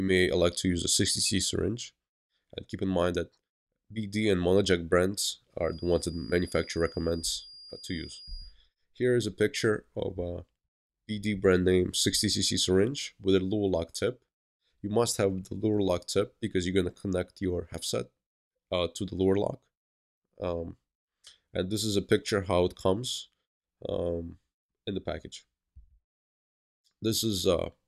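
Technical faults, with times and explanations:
5.58 to 8.56 s, feedback whistle: a thin, steady tone near 4.8 kHz sits behind the sound for about 3 s, roughly 20 dB below it, swelling and fading slowly in level before it stops. The likely cause is the loudspeaker-to-microphone loop hovering right at the edge of feedback, so that one frequency keeps ringing without growing. Unlike a runaway howl, it never builds up. Unlike steady electrical interference, its level wavers instead of staying fixed.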